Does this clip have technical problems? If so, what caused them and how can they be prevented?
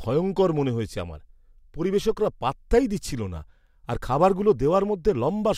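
No, there are no technical problems to address here.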